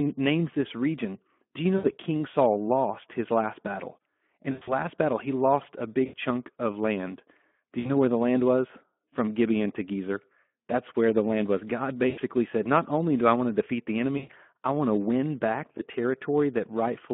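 Speex codec damage runs throughout the speech. The band is limited to 200 Hz to 3.4 kHz. The excitation is starved of bits, which fits a rate near 11 kbps. The voice sounds hoarse and grainy.

VoIP packet loss concealed by the speech codec then breaks in seven times. It falls at 1.78–1.91 s after "you know", at 4.51–4.89 s before "battle he lost a", at 6.05–6.17 s, at 7.79–7.91 s before "where the land was", at 12.09–12.20 s, at 14.17–14.32 s and at 15.77–15.83 s. Each time, the decoder stretches its last pitch and filter into a fading buzz or coloured noise. Speech stays weak briefly afterwards.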